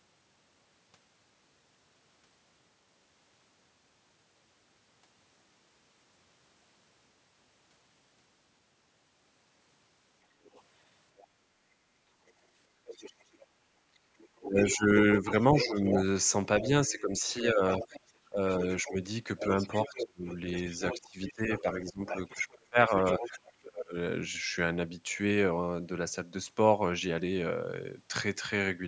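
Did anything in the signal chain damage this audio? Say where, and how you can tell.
Yes. A faint second voice leaks through from 10.44 to 11.24 s, then a much stronger one from 12.27 to 23.52 s. This is the other side's voice leaking through, likely because the call's echo canceller left some loudspeaker echo in the microphone signal.

Between 13.9 and 23.95 s the main talker repeatedly dips by up to about 20 dB, adding up to roughly four seconds. This is speech suppressed in double talk, likely from the canceller turning both voices down.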